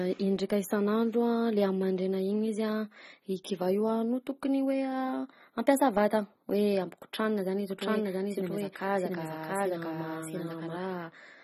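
A speech recording with plainly audible codec damage throughout. Nothing sounds above 13 kHz, and the sound is dull and smeared. This is AAC compression, likely AAC-LC at a low bitrate near 24 kbps, which trims the top band and coarsely quantises the rest. From 7.71 s to 10.77 s, right after "hoe ampikotranina zany izy", there is a doubled audio track. A second full-band copy trails by roughly 0.7 s at about the same level, with no room colour. It starts and stops abruptly. The likely cause is either a slower second capture path or an edit that left two unaligned copies.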